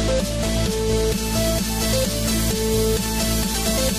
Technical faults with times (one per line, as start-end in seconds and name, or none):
none